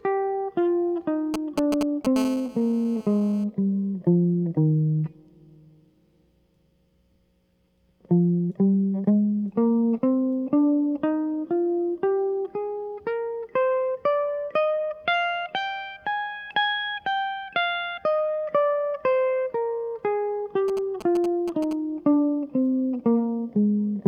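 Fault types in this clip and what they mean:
GSM signalling bursts: A nearby 2G phone's short radio bursts, rectified by the audio circuit, give galloping ticks and brief 217 Hz buzzes over the music, broken rather than continuous, near 1.3 and 20.7 s.
GSM phone buzz: A hard, raspy 217 Hz buzz at about -16 dB from 2.16 to 3.44 s, nearly steady as in a call, unlike the choppy signalling pattern.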